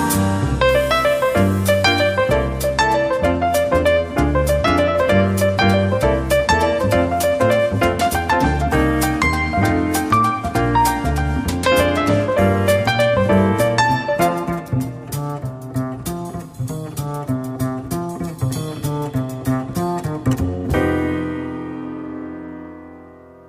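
Nothing here trips the ear at all, so there's simply no fault to point to anywhere in the recording.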